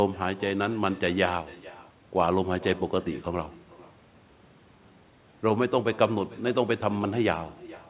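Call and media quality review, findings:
Echo with no canceller, present throughout: every phrase trailed by a quieter, thinner copy about 0.4 s later, around 20 dB down. Far-end loudspeaker-to-mic loop, no AEC. Spectrogram: faint duplicate of each formant band offset right. Waveform: low-amplitude ghost bursts after each speech burst. Band limit at 4 kHz fits a G.711 call path.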